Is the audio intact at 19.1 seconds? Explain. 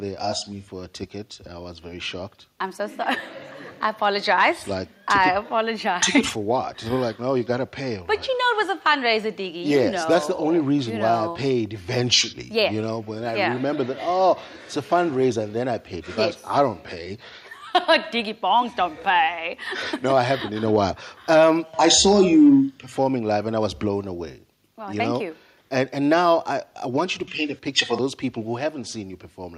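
Yes, the audio is intact at 19.1 seconds, with no dropout, click, distortion or other fault at that point.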